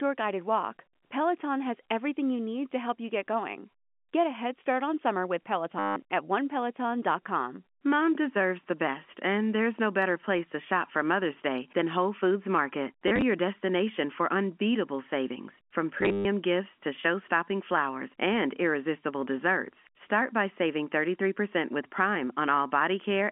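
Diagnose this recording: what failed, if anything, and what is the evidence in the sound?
Packet loss with last packet repeated, a network-stage fault, at 5.79 to 5.96 s, 13.08 to 13.22 s and 16.01 to 16.25 s. The first is one solid 170 ms gap. The second scatters 60 ms of loss over 140 ms, with no run longer than 30 ms. The third loses 190 ms over 240 ms, including a 130 ms run. The receiver refilled each hole by replaying the last good packet, giving a robotic stutter whose repetition fits 10 ms packets, heard within the G.711 line's narrow telephone band.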